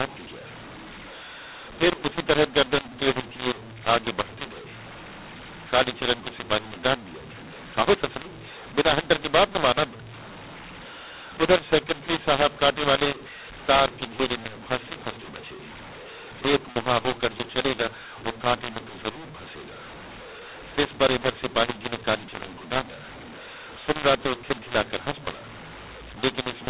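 From start to finish, the speech has mu-law and A-law mixed up. It was coded as A-law but decoded as mu-law. Levels come out scrambled, some too loud, others too soft. The voice sounds harsh and distorted. Pauses fill with hiss, all within the 4 kHz telephone band.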